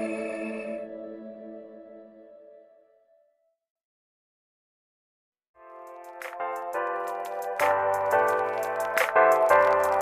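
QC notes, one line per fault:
No technical faults are audible anywhere in the signal, and level, continuity and channel behaviour hold steady across the whole recording.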